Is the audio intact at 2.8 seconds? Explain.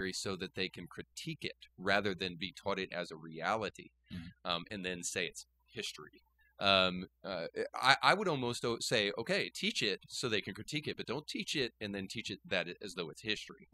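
No. At 2.8 seconds, as everywhere in this speech clip, a steady low drone sits under the voice, pitched at 60 Hz with a few low harmonics above it, and strong enough to be nearly as loud as the speech itself. This is mains hum: a ground loop or a transformer close to the recording chain has let the 60 Hz power line leak into the signal, so the tone never changes or pauses across the whole recording.

At that same moment the gaps around the voice drop to an unnatural near-silence dotted with twinkling specks. That points to overdone noise removal, present throughout the clip. A noise reduction stage set far too aggressively has cut individual frequency bands whenever they came close to its idea of the noise floor, removing the quieter parts of the voice along with the background and leaving scattered isolated bands that flicker on and off.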